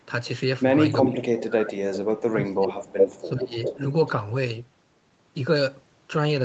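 Echo leak appears in this speech clip at 1.0–1.41 s, 2.18–2.23 s, 2.68–3.28 s and 3.62–4.1 s: a copy of the other side's audio returns about 0.4 s late, likely because a loudspeaker echo canceller let it through. It ranges from slightly louder than the talker at first, to a faint trace, to equal level, then a little below. Speech suppressed in double talk follows at 1.07–2.7 s and 3.2–3.78 s, where the talker's voice dips by roughly 20 dB and then 15 dB, likely because the canceller, faced with both sides at once, turned the near talker down along with the echo.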